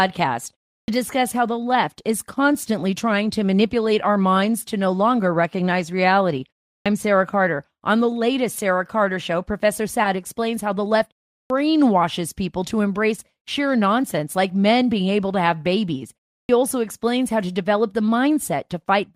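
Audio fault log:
0.80 s, 6.78 s, 11.43 s, 16.42 s: clipped start after a pause. After each pause of about a third of a second, the output device seems to doze off and needs 70 to 80 ms to wake, so the opening of "discuss how the left", the restart after "explains how the left" and "also explains how to" come in abruptly.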